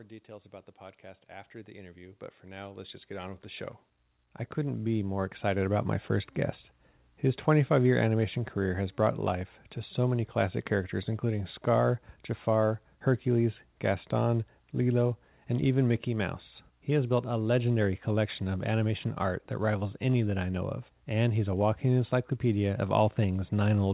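Automatic gain rising runs from 0.26 to 7.35 s: the gain control judged the input too quiet and kept pushing its level up, about 19 dB in all, so the speech and the background noise swell together steadily, heard through a call path with nothing above 4 kHz.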